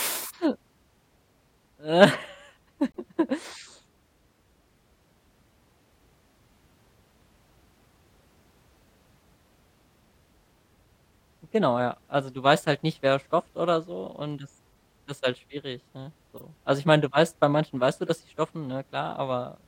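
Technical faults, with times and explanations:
2.89 to 2.97 s, corrupt frame muted: the decoder rejected damaged compressed data and the player substituted silence. The result is an abrupt 78 ms hole in the speech, which points to several consecutive frames being dropped. The waveform falls flat at once, and the spectrogram shows a clean blank column.
16.37 to 16.42 s and 18.07 to 18.10 s, corrupt frame decoded: each time, a couple of damaged frames were played anyway. Misread gains and codes put energy at the wrong frequencies, which sounds like a short glitch such as a chirp, squeak, blip or burst of noise. The error peaks at about -30 dBFS and then about -20 dBFS. On a spectrogram each burst is a narrow patch of stray energy.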